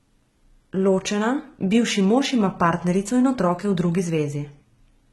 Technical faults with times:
0.00-5.13 HE-AAC compression

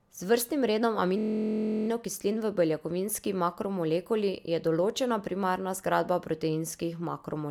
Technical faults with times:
1.18-1.88 system hang loop

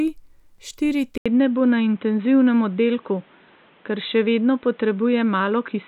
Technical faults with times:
1.18-5.88 input switched to a poorer device

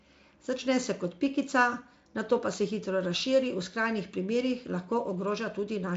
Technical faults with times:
none

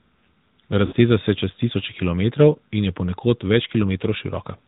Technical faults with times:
0.00-4.68 AMR narrowband mobile codec
0.86-0.93 lost AMR speech frames

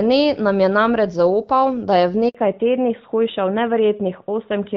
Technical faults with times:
2.29-2.35 handover gap
2.35-4.76 fallback to narrowband

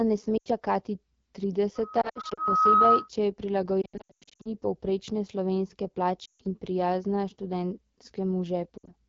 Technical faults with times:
0.00-9.09 AMR wideband (HD Voice) codec
0.37-0.48 lost AMR speech frames
1.75-3.09 loudspeaker feedback squeal
2.02-2.42 lost AMR speech frames
3.82-4.50 lost AMR speech frames
6.26-6.42 lost AMR speech frames
8.77-8.92 lost AMR speech frames

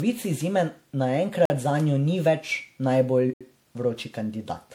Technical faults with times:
0.00-4.75 generation loss
1.45-1.50 block of digital silence
3.33-3.41 block of digital silence

